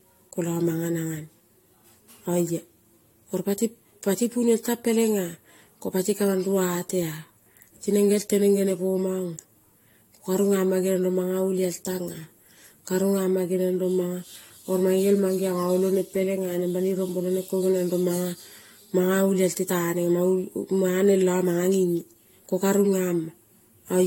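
Speech that sounds swirly, hollow and smeared throughout, with softened consonant attacks and nothing above 16.6 kHz. This is likely generation loss: the audio was encoded about three times with AAC-LC at what sounds like 64 kbit/s, each pass adding quantisation noise and spectral holes.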